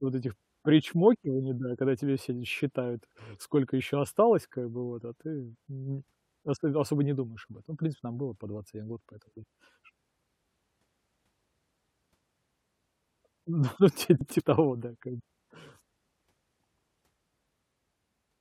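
At 14.21 to 14.41 s, between "ну ти" and "того да как бы", frames out of order swap two adjacent blocks of about 93 ms, giving a garbled flutter. The waveform shows abrupt steps there, and the spectrogram shows formant tracks jumping discontinuously.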